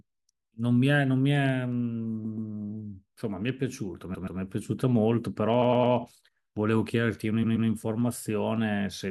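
Repeated frames stutter the speech at 2.24–2.50, 4.14–4.39, 5.61–5.93 and 7.42–7.68 s. Each time a block of about 128 ms replays twice (107 ms three times at 5.61 s). Unlike a dropout, identical audio repeats and adds time.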